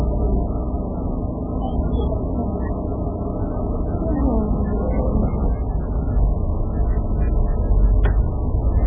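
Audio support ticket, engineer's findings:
Likely MP3 compression at a starved bitrate, consistent with roughly 8 kbps, throughout. Encoder cuts the treble, so nothing above 3.4 kHz, giving a dull sound. Weak frequency lines gated frame to frame, producing heavy watery, swirling artefacts and smeared attacks.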